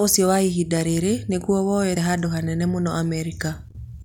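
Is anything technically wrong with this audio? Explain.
Yes. Damaged data in a compressed stream at 1.95 s: part of the encoded speech stream is corrupted there, so the decoder misreads that frame, loses sync and hunts for the next valid frame header. The result is a brief glitch breaking into the speech.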